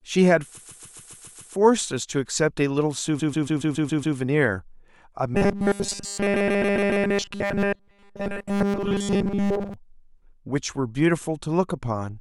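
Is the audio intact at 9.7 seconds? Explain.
No. At 9.7 seconds the audio is still inside a stretch of robotic sound from repeated short buffers that runs from 5.35 to 9.74 s. The speech turns into a rigid, metallic buzz pitched at 200 Hz, which points to a 5 ms block being replayed. The likely cause is new audio arriving too late, so the software loops that last short block and skips nearly all the real signal underneath.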